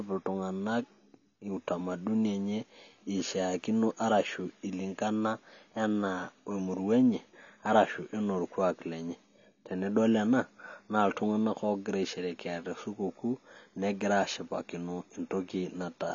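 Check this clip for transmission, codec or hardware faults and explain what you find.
One codec fault runs through the whole recording: AAC compression. Nothing sounds above 7 kHz, and the speech is plainly dulled, with a smeared, warbling, fizzy texture on sustained sounds and sibilants. The cause is likely low-bitrate AAC-LC coding, which fits about 24 kbps: the encoder lowers its cut-off and quantises frequency bands coarsely, leaving holes. A simple low-pass filter would sound dull but clean, without this swirling, watery grain.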